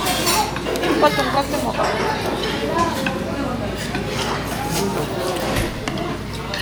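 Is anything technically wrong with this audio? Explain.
No, nothing technically wrong can be heard here.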